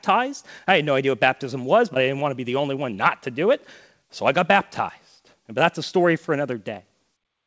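At 1.94 to 1.97 s there is a short concealed packet loss. About 20 ms of the call arrived too late for the decoder. The receiver extended the preceding sound to cover the gap, then blended back. It is heard as a brief smear in the speech. The call audio has nothing above 8 kHz, which fits a wideband codec such as G.722.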